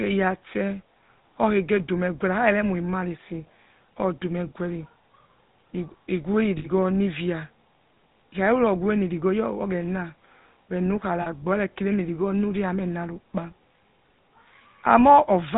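GSM full-rate codec damage runs throughout: the vocal tract is modelled and driven by sparse pulses, with nothing above 4 kHz, leaving a plainly buzzy, gravelly speech sound consistent with 13 kbps coding. Lost GSM frames occur at 6.58 to 6.67 s and 11.22 to 11.27 s. Each gap is bridged by repeating the last good frame, producing a brief rough, metallic ring.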